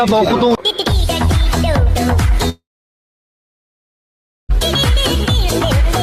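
At 2.49 s the audio breaks off in a long network dropout that lasts until 4.54 s. For roughly the first tenth of a second the receiver keeps the last sound going as a decaying buzz or hiss. After that the gap stays silent for close to two seconds. When the stream resumes it does not pick up where it stopped. About two seconds of material is missing, likely lost in transit rather than delayed.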